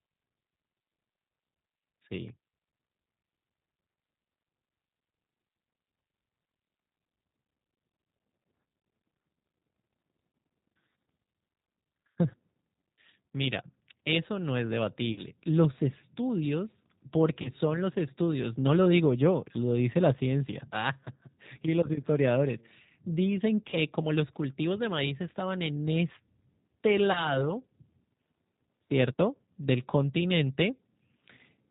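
G.729 codec damage runs throughout. Speech is cut off above 4 kHz and sounds plainly rough and synthetic, which fits pulse-based coding at 8 kbit/s.

VoIP packet loss concealed by the speech codec occurs at 15.13, 17.42, 23.70 and 27.12 s. Each 30 ms gap, consistent with one lost packet, is filled with a fading extrapolation, a buzzy tone or coloured noise. The weakened sound after the gap lasts until 27.45 s at the last event.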